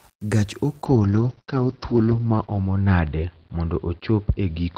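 Low bit depth without dither runs through the whole speech clip, from 0 s to the end. A grainy, gritty distortion rides on the signal and changes with it, roughest on quiet syllables and fading into a sputter as the level falls. The likely cause is rounding to very few bits with no dither, so the error tracks the waveform instead of forming a steady hiss. The grit sits roughly 35 dB below the speech, which fits 8-bit rounding.

A call bitrate drop begins at 0.9 s and lasts to the end. The encoder was pushed to a much lower rate, which points to a fall from around 32 kbps to around 8 kbps. With so few bits it codes the speech coarsely and trims the top of the spectrum, so the bandwidth shrinks from 20 kHz to 6 kHz. The voice turns muffled and watery, and is roughest during the 1.7 s at the lowest rate.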